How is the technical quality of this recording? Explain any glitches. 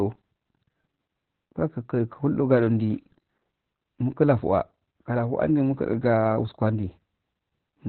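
The technical quality is poor. Throughout the speech, the sound is muffled, hoarse and slightly robotic, with nothing above 4.2 kHz. This is heavy Opus voice compression. Its SILK coder has narrowed the band and coded the excitation coarsely, which fits a very low bitrate of around 8 kbps.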